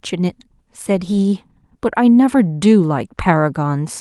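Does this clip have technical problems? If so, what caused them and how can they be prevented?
No, the speech signal is clean, with nothing in it that calls for a cause or a fix.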